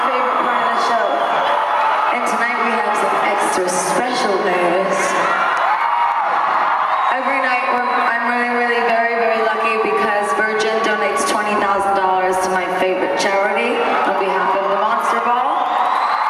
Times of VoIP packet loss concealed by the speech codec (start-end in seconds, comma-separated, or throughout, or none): none